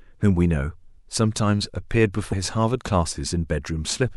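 At 2.29 s the speech breaks into a short glitch lasting until 2.33 s. This is damaged data in a compressed stream. Corrupted bytes made the decoder misread the frames there. It lost sync and hunted for the next frame header, producing the glitch.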